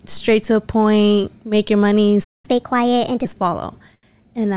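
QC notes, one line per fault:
2.24 to 2.45 s, playback stall: the speech cuts to silence for about 200 ms in mid-flow, then resumes. The likely cause is the player running out of buffered data or its output thread being blocked, leaving nothing to send to the output until it recovered.
2.45 to 3.25 s, catch-up at higher speed: right after the gap the speech runs at 1.25 times normal speed, with pitch raised by roughly four semitones, because the backlog is resampled faster to recover the lost time before settling back to normal rate.
3.95 to 4.05 s, short stall from a late packet: a sound is held unnaturally long for 83 ms. A packet arrived late, the jitter buffer emptied, and the receiver stretched the last audio until it came, so nothing is lost, only drawn out, over the band-limited G.711 call path.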